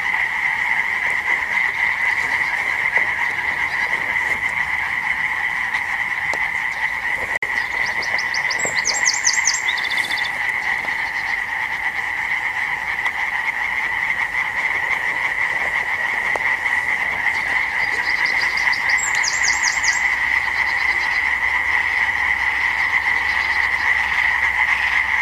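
A likely Bluetooth stall, with delayed packets starving the playback buffer, drops the audio to silence for 52 ms, from 7.37 to 7.42 s.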